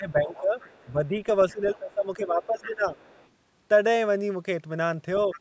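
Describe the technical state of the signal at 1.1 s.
At 1.1 s the speech sits inside a stretch of speech suppressed in double talk (0.0 to 1.15 s). The likely cause is an echo canceller ducking the talker along with the far-end echo. The speech dips as much as about 15 dB.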